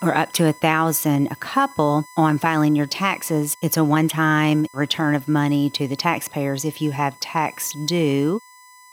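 A fixed-pitch whine at 1 kHz runs under the audio from start to finish. It is USB whine. The tone sits roughly 25 dB below the wanted signal. Its pitch points to the USB bus and its 1 ms frame timing. The bus pulls current in bursts at that rate. That ripple leaks into the audio path through shared power or ground.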